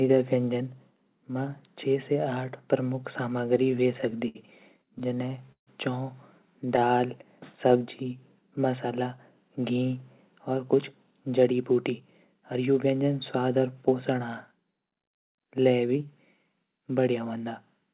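Speech, band-limited with nothing above 4 kHz, which fits a G.711 mu-law call path at 64 kbps, shows three kinds of jitter buffer fault. Repeated stalls (stutter) occur from 3.64 to 4.37 s and from 4.86 to 5.69 s. Packets arrived late, so the buffer kept running dry and the receiver stretched the last sound to fill each gap, up to 67 ms and then 146 ms. Roughly a fifth to a quarter of each span is concealed, giving a dragging, stuttering delivery with nothing actually lost. Jitter buffer slow-down follows at 6.65 to 7.08 s and 7.68 to 8.14 s. Here the receiver rebuilt its reserve by repeating single pitch periods, adding about 49 and 48 ms, so the speech runs at 90 and 91 percent speed with pitch unchanged and sounds drawn out. Jitter buffer speed-up from 10.50 to 12.95 s does the reverse. With excess audio queued, the receiver trimmed pitch-period-sized pieces, removing roughly a fifth of a second in total, so the speech plays at 108 percent speed at normal pitch and sounds hurried.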